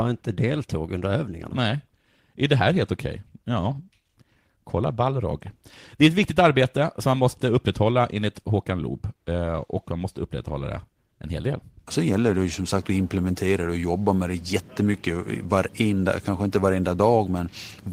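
Listening to this speech recording, nothing technical stood out as wrong at any point.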